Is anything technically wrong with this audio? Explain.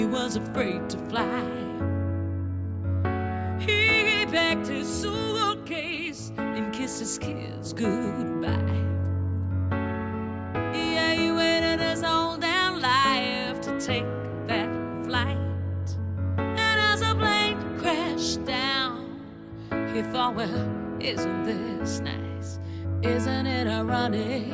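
No, no technical faults.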